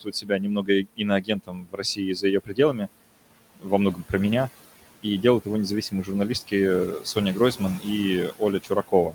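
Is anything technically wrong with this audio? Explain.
Yes. Noise suppressor artifacts run through the whole clip. The suppressor pulls the room noise, which sits about 17 dB below the speech, down by about 17 dB in the gaps and lets it back up under speech. On a spectrogram, the noise floor drops and refills frame by frame.

Speech cut by the noise suppressor occurs from 0.01 to 2.88 s, from 3.56 to 4.13 s, and from 5.03 s to the end. Here the suppressor mistook parts of the speech for noise and turned them down by up to about 19 dB in the first stretch and about 16 dB in the other two. The first stretch loses roughly a second in total, and the second stretch loses only a brief moment. Soft consonants and word endings sound swallowed, and the waveform shows their tails turned down with the background.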